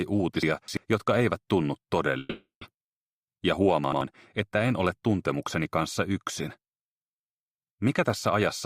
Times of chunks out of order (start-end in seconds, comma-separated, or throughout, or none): 0.43-0.77, 3.84-4.01